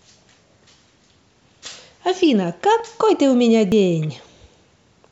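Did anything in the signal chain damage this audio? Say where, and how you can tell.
Yes. Two jumps in the speech, at 2.8 s and 3.72 s, point to a driver or buffer stage, likely a dropped buffer (overrun). Unread samples were overwritten and the edges butted together, skipping roughly 20 ms and then about 70 ms.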